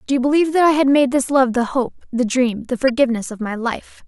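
Speech runs through the clip, and it has two kinds of fault. The first is a corrupt frame decoded, heard twice. At 1.55 s a short blip sits over the speech, spread over roughly two frames and peaking at about -25 dBFS. At 2.88 to 2.90 s a louder burst follows, about one frame long and peaking near -10 dBFS. In each case damaged compressed data was decoded anyway. Misread values pushed energy into the wrong frequency bands for the frame's duration. The second fault is dropped samples. Single sharp clicks land at 2.49 s and 3.44 s. Each is a sudden jump in the waveform where a handful of samples are missing, well under a millisecond of audio. The gap is far too short to erase any sound. It only breaks the waveform's continuity. A tiny loss in the sample stream is the likely cause.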